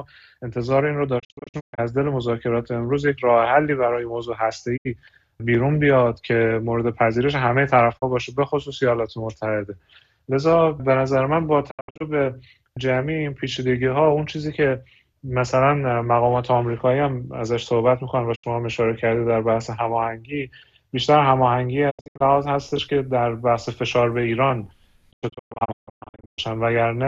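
The receiver repeatedly lost the digital signal or rejected damaged frames and muted until clean frames returned. This digital broadcast dropout occurs at 1.18, 4.76, 7.97, 11.69, 18.34, 21.89 and 25.11 s. Each mute fades in over about 20 ms. At 1.18, 11.69, 21.89 and 25.11 s the sound breaks into clusters of short holes. The last cluster spreads over 1.25 s with 840 ms missing. The other three are single gaps of 24 to 72 ms.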